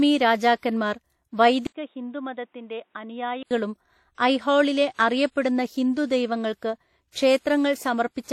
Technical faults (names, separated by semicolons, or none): transcoding between lossy codecs; input switched to a poorer device